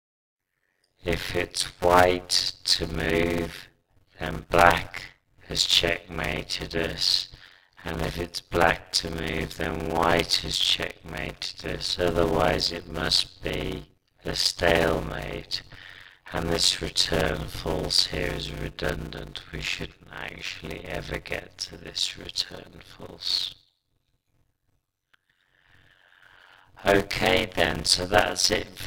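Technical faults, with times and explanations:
throughout, block size mismatch (padded): one stage writes shorter blocks than the next reads, and zeros fill each remainder, so every block carries a silent gap. That produces a 91.9 Hz buzz and slows playback to 0.533 times speed at about normal pitch, consistent with 256-sample writes.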